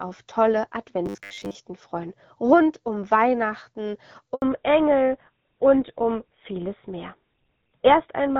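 From 1.06 to 1.55 s, just before "freuen rund um", the speech turns into a rigid, metallic buzz at 100 Hz. This is robotic sound from repeated short buffers, likely caused by a 10 ms stretch being replayed to cover late input while most of the real audio in that span is skipped.

At 4.34 s a handover gap cuts the sound to silence for 80 ms. No frames arrived while the call switched networks, and the audio in that interval is lost.

From 4.42 s to the end, the call falls back to narrowband. Nothing above 4 kHz remains, so the speech sounds duller and rougher. The change points to GSM full rate replacing the AMR-WB HD Voice codec, which fits a change from roughly 12.65 to 13 kbit/s narrowband coding. Before the switch, AMR-WB adds only light codec damage.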